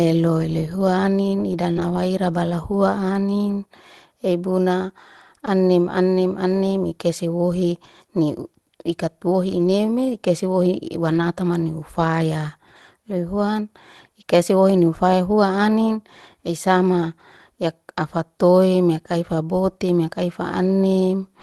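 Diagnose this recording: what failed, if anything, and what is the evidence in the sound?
Network loss is the culprit at 1.71 to 1.78 s, a short concealed packet loss. About 40 ms never arrived in time, so the receiver stretched the preceding sound to cover the hole and then blended back in. You hear it as a brief smear or wobble.

Right after, from 1.76 to 1.82 s, and again at 9.50 to 9.68 s and 11.10 to 11.24 s, there's lost packets rebuilt from error correction. Opus in-band FEC let the decoder play lower-quality copies carried in the next packets, so nothing drops out, but those stretches sound rougher and noisier. The spans fit roughly two, five and four 20 ms packets.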